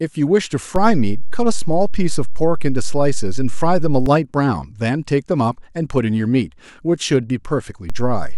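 Speech, with two DC steps. At 0.76 s the waveform's zero line jumps by about -13 dBFS and holds until 4.06 s, and at 7.90 s it jumps again by about -14 dBFS and stays offset to the end. Each jump and return gives a low thump while the speech continues unchanged. Unlike a dropout or handling bump, nothing in the sound itself is lost or disturbed; only the baseline shifts, as when a converter recalibrates or an offset input is switched in.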